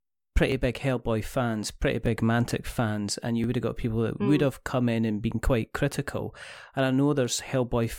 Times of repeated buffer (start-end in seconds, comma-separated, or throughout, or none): 0.52, 2.06, 3.44